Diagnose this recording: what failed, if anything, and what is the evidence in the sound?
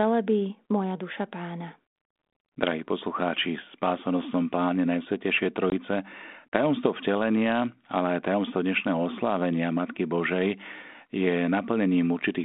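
Network packet loss on the ADPCM call at 5.70 s leaves a hard-edged 20 ms flat gap in the waveform. Speech returns slightly distorted while the decoder's desynchronised predictor re-converges.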